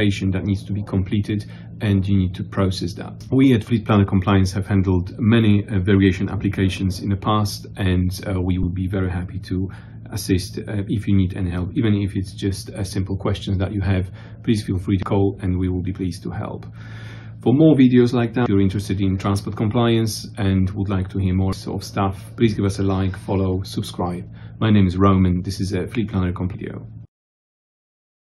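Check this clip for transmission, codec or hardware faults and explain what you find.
The clip has one kind of fault, heard five times. Damaged data in a compressed stream occurs from 8.63 to 8.71 s and at 15.03, 18.46, 21.53 and 26.54 s. Corrupted frames make the decoder lose sync and hunt for the next header, causing brief disruptions in the audio.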